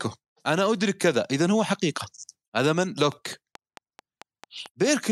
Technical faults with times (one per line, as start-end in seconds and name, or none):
3.12-4.89 train of clicks